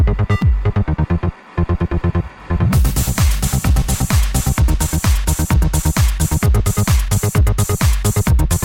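Hard clipping runs through the whole clip: the sound is driven about 4 dB past what a stage can pass, so a small share of samples, roughly 3 percent, have their peaks sliced flat. Unlike gentle saturation's rounded warmth, this is brief crackle on peaks.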